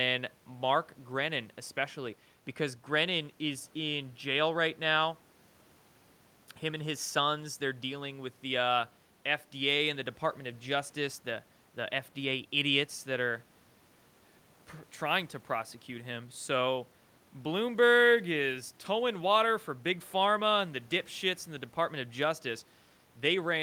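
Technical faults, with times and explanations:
No technical faults are audible in this recording.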